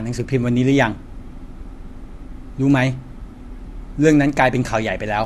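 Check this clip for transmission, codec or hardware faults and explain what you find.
One codec fault runs through the whole recording: low-bitrate audio saved at a high bitrate. From start to finish the speech has nothing above 12.2 kHz, and it still carries the artefacts of the first, low-bitrate encoding. The likely cause is speech first squeezed by a low-bitrate codec, consistent with AAC at around 48 kbit/s, then re-saved as a high-bitrate MP3. The larger file cannot restore what the first pass discarded. On a spectrogram, energy stops at a flat horizontal line near 12.2 kHz, with blotchy, quantised detail below it. The waveform shows nothing unusual.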